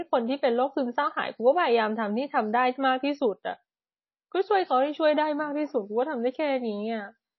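From start to end the speech carries likely MP3 compression damage: nothing sounds above 5.8 kHz, and the thinned spectrum gives a watery, swirling texture that fits a low bitrate of about 24 kbps. A spectrogram shows a flat ceiling at 5.8 kHz with patchy, flickering energy beneath it.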